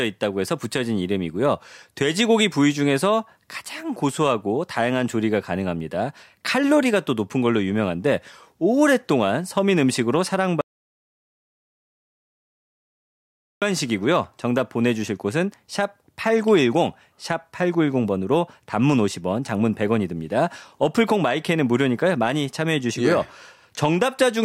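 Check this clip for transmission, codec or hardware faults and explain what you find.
One fault stands out: an audio dropout to silence from 10.61 s to 13.62 s, about 3.0 s long. The speech stops abruptly mid-flow and returns just as suddenly, with nothing in between, not even room tone. The likely cause is a lost input, such as a disconnected device, a failed link or a mute, while recording or encoding carried on writing zeros. On a waveform the gap is a flat, silent stretch; on a spectrogram it is a solid black band across all frequencies.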